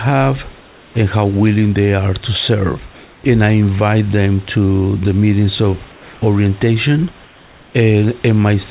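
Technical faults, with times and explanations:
0.58–0.94 s and 5.92–6.22 s, comfort noise in place of the background: in these pauses, 360 ms and 300 ms long, the detailed room noise gives way to a smooth, featureless hiss about 2 dB quieter, and the real background comes back when the sound resumes. The likely cause is discontinuous transmission. The sender went silent when it detected no speech, and the receiver filled the gap with synthetic noise shaped only broadly like the room.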